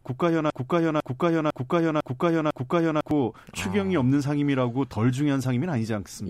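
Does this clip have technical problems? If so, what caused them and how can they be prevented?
Yes. The speech opens with a broken-record loop: from the start of the clip until about 3.11 s, the same 0.5 s fragment repeats exactly, back to back, five times, and it is already under way when the clip begins. The likely cause is a stall in the player, encoder or stream, which kept resending the last fragment it held instead of new audio, so whatever should have played during those three seconds is lost. To prevent it, monitor the pipeline for stalls and have the player output silence or drop out on underrun rather than re-emit the last buffer.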